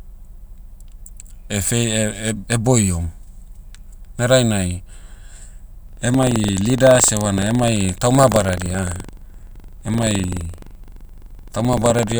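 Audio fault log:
5.85–12.19 s, buffer tearing: the speech takes on a robotic 23.4 Hz rattle, fitting a 2048-sample buffer. Each period splices in a small slice of audio from about 150 ms earlier. The waveform shows hard steps at the joins, and the spectrogram shows regular vertical lines that vanish in pauses.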